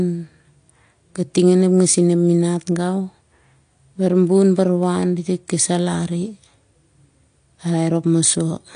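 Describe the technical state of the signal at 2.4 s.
At 2.4 s the speech carries AAC compression damage, present throughout the clip. Nothing sounds above about 9.8 kHz, so the top end is dull. Sibilants have a smeared, fizzy texture. That points to AAC-LC, likely at a low bitrate near 32 kbps, quantising its frequency lines coarsely.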